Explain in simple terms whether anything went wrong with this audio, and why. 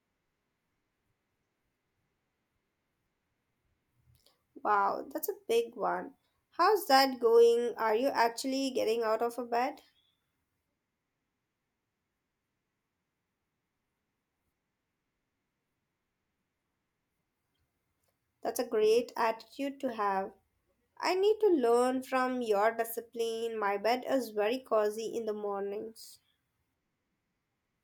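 Nothing went wrong here: the recording of speech carries on steadily with no glitches, gaps or odd noises to point to.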